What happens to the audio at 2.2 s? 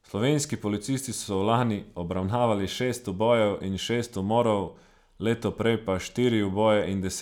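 Nothing goes wrong at 2.2 s: the speech carries on intact, with no dropout, click, distortion or other fault at that moment.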